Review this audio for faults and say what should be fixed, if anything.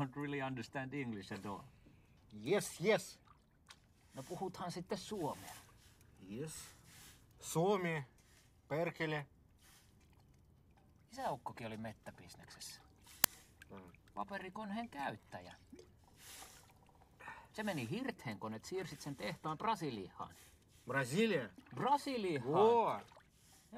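There's one fault to fix: an uninitialised buffer at 13.24 s. You get a very short, loud crack, lasting about 2.9 ms, which fits a 128-sample block. What happened is that a block went out to playback before any audio had been written into it, so whatever was left in that memory got played as samples. To prevent it, zero-fill every buffer when it's allocated, or hold playback until the first block is written.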